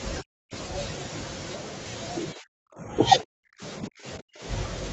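Speech suppressed in double talk at 0.21–0.53 s, 2.33–2.95 s, 3.22–3.63 s and 3.80–4.43 s: the speech falls by up to about 40 dB and thins or breaks off. An echo canceller likely could not separate the talker from overlapping loudspeaker echo and turned both down.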